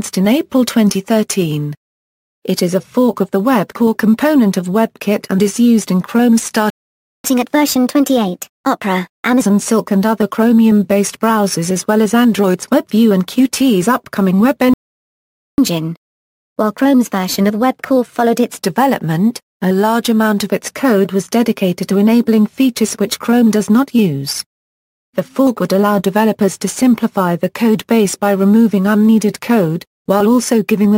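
The audio has two playback stalls, at 6.70–7.24 s and 14.74–15.58 s, where output cuts to silence for 0.54 s and 0.85 s, likely from buffer underrun or a blocked player thread. Each is followed by catch-up at higher speed: 7.24–9.41 s runs 1.25 times fast, pitch raised about four semitones, and 15.58–18.58 s runs 1.15 times fast, about two semitones up.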